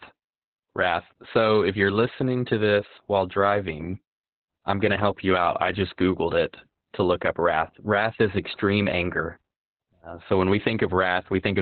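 Throughout, heavy Opus voice compression leaves the speech muffled and hoarse. The spectrogram is empty above 4.4 kHz, pointing to narrowband SILK coding near 8 kbps.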